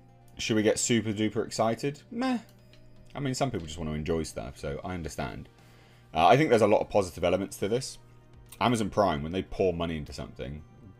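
From the first moment to the last there's mains hum sitting under everything, a steady low drone at 60 Hz with a few low harmonics stacked above it. Something in the chain picked up the power line, most plausibly a ground loop between pieces of gear or a transformer sitting too close to a cable. It's roughly 30 dB below the sound itself, so it's not overpowering.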